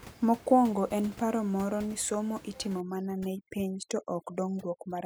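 From 2.80 s, right after "moro ni somo itimo", to the end there's overdone noise removal: a denoiser set far too hard is gating individual frequency bands near its noise estimate, so the room tone drops and breaks up into twinkly specks.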